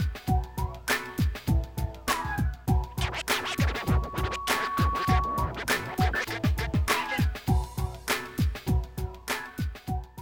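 From 3.41 to 5.59 s a loudspeaker feedback squeal rises at 1.1 kHz: the microphone re-amplifies its own loudspeaker until that frequency runs away. Unlike a steady interfering tone, it swells over roughly a second and a half, ending several dB above the sound.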